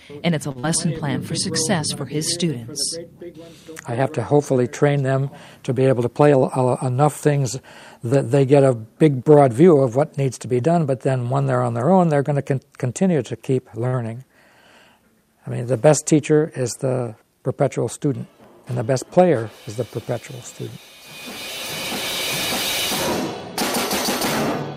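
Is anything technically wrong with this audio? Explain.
Yes. The audio has three kinds of network playback fault.

Short stalls from a late packet occur at 0.51 to 0.58 s and at 13.87 to 13.96 s. Each time a packet arrived too late, the jitter buffer ran dry, and the receiver held the last sound for 38 ms and then 55 ms before resuming exactly where it left off. The sound lingers unnaturally, with a faint buzz or dip, but nothing is skipped. That is what separates a stall from a loss.

A short concealed packet loss follows almost immediately, at 0.59 to 0.66 s. About 40 ms of audio never reached the decoder. The receiver patched the gap by extending the preceding sound, either periodically or as shaped noise, then crossfaded back into the real signal. It comes across as a brief smear or wobble. Unlike the stall just before it, real material is missing here, so a short sound can disappear outright.

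Jitter buffer speed-up occurs at 6.01 to 6.42 s, running at 109%, and again at 17.98 to 18.93 s, at 105%. After a backlog built up, the receiver repeatedly trimmed short pitch-period slices, removing roughly fifty milliseconds in each episode to bring the delay down. The pitch stays put while the audio runs noticeably hurried. That distinguishes it from a resampling error, which would raise the pitch along with the speed.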